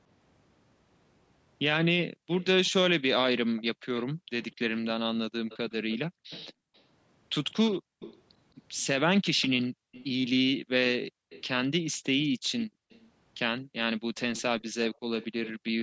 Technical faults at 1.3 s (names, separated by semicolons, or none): none